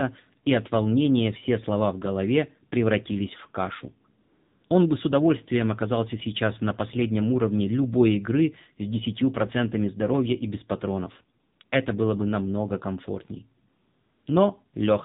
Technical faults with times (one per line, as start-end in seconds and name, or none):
0.00-15.04 AMR narrowband mobile codec
4.22-4.70 AMR comfort noise
11.40-11.72 AMR comfort noise
13.70-14.26 AMR comfort noise
14.68-14.74 AMR comfort noise